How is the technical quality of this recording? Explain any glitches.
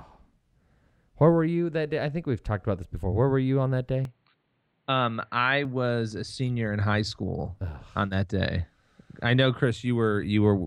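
One glitch stands out in this speech recording. An input switched to a poorer device from 4.05 to 5.65 s, likely a change to another microphone. For those 1.6 s nothing above 4.4 kHz comes through, so the speech turns dull and boxy and a few dB quieter, with faint new background noise, before clearing again with no gap at either switch.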